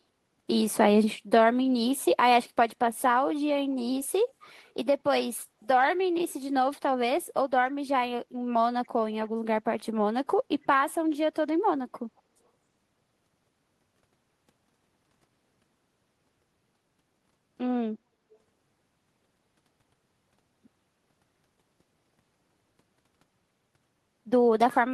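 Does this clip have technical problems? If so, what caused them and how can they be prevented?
Yes. At 12.17 to 12.21 s there is a brief echo leak. A faint delayed copy of the speech returns about 260 ms after the original. It sits far below the speech and is easy to miss. The likely cause is a far end playing the call on a loudspeaker. Its echo canceller did not fully remove what its microphone picked up, and the remainder was sent back. Prevent it by using headphones or a well-tuned echo canceller on the loudspeaker side.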